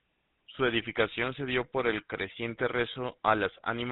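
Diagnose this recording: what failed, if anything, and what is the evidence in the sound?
The fault is at the codec stage: the GSM full-rate codec gives the speech a plainly audible buzzy, gravelly roughness throughout, consistent with a 13 kbps encode. It resynthesises speech through a vocal-tract filter driven by regular pulses, keeping one excitation sample in three. A spectrogram shows nothing above 4 kHz.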